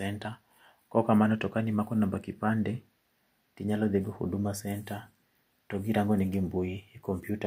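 A recording of speech, with nothing technically wrong to be heard in it.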